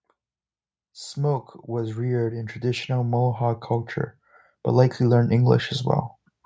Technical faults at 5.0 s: automatic gain rising

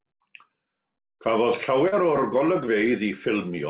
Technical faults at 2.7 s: short concealed packet loss

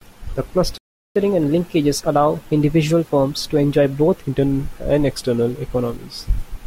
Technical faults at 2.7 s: catch-up at higher speed

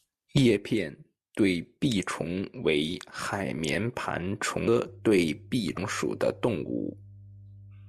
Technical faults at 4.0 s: none

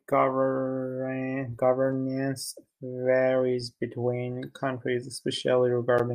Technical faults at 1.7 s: none

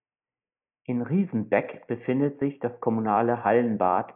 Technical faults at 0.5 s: none

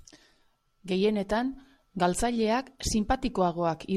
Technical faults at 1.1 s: none

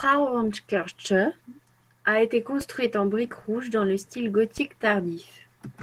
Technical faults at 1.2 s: Opus voice compression

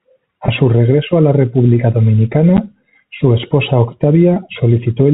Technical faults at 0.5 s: packet loss with pitch repetition

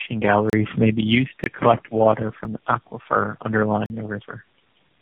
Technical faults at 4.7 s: tandem speech coding

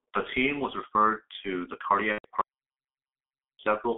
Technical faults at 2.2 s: G.723.1 codec; VoIP packet loss concealed by the speech codec

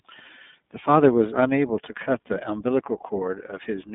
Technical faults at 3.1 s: iLBC codec

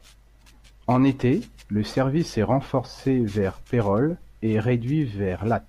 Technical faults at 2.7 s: none

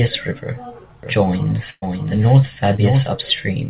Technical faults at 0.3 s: none

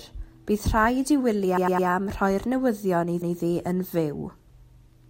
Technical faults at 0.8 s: none

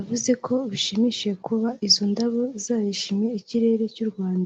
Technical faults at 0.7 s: none

